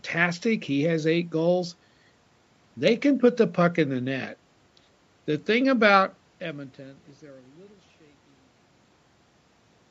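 No faults: the speech ends in a deliberate smooth fade-out from around 6 s, the call microphone processing leaves nothing above 8 kHz, and the room noise sits about 42 dB below the speech.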